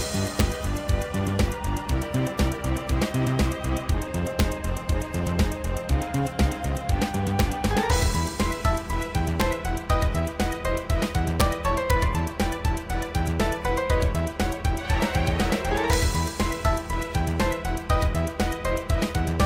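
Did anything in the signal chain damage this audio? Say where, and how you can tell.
Yes. There are seven violent cracks at 0.4, 4.4, 7.4, 9.41, 11.41, 11.91 and 15.93 s, each lasting no more than about 8 ms. They are far sharper than ordinary clipping. This is integer overflow at a fixed-point gain or sample-format conversion stage. Peaks that reach the top of the integer range, overshooting by about 0 dB, wrap to the opposite sign instead of saturating. The waveform jumps across its full range, producing a crack rather than a flattened top.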